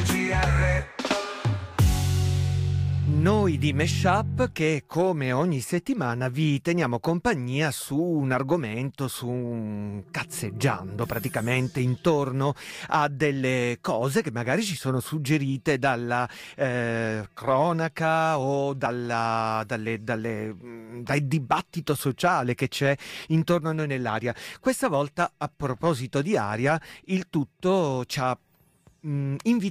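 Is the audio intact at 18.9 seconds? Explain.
No. At 18.85 to 18.87 s, compressed frames were skipped: a couple of frames were missing or rejected by the decoder as damaged, so playback jumps ahead by about 50 ms.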